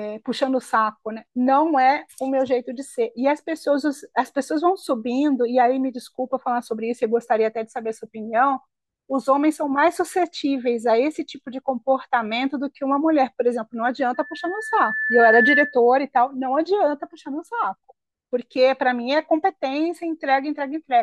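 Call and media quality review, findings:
Loudspeaker feedback squeal, 14.14–15.79 s: single 1.8 kHz tone swelling over about a second to roughly 5 dB above speech. Mic-to-speaker loop gain exceeding unity at that frequency.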